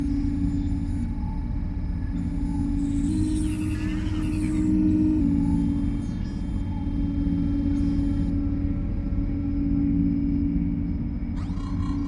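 From 3.09 to 5.21 s the audio plays at the wrong sample rate. It runs about 1.09 times fast and about 1.5 semitones high, and speed and pitch shift together, unlike a pure pitch shift.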